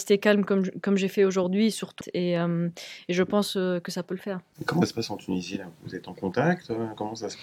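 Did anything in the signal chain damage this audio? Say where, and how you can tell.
Yes. Damaged data in the compressed stream (codec stage) at 2.00 s and 4.81 s: short blips as the decoder misread corrupted frames and regained sync.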